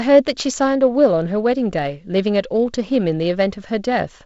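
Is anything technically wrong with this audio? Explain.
Yes. From 0.12 s to 4.24 s, the speech carries clock slip clicks. Tiny ticks repeat about every 30 ms, fusing into a soft rattle. The likely cause is two unsynchronised clocks drifting roughly 700 ppm apart, dropping or repeating one sample at each slip. This happens underneath the G.722 wideband coding, whose band stops near 7.7 kHz.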